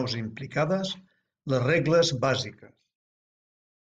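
Zipper noise, 2.43 to 2.99 s, after "les regles": level falls about 25 dB in unsmoothed steps of about 2 dB, ticking twenty times a second.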